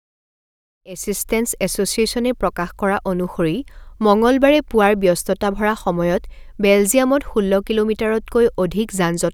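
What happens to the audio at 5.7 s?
At 5.7 s the speech continues cleanly, with no dropout, click, distortion or level change.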